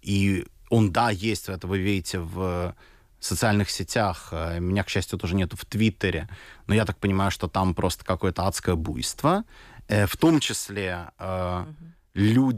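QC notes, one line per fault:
Nothing stood out on listening to this speech recording.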